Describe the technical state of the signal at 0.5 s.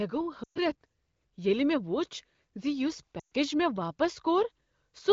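At 0.5 s the signal is inside a run of lost AMR speech frames spanning 0.43 to 0.59 s. About 120 ms of coded speech failed to arrive intact, consistent with six consecutive 20 ms frames. The wideband decoder conceals the gap by repeating the last valid pitch and vocal tract parameters at steadily falling gain. The sound drops to near silence within two frames, then returns briefly weak or rough.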